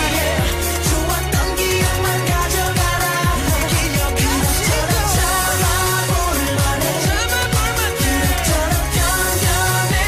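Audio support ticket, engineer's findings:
No faults found in the signal path, with no dropouts, clipping, glitches or level anomalies detected across the capture.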